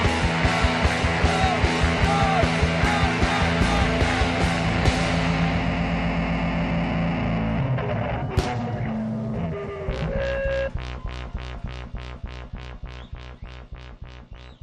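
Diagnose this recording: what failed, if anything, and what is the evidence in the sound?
Nothing failed: no stage of the chain, from wiring and conversion through processing, transport, storage and playback, leaves any audible evidence of a fault anywhere in the recording.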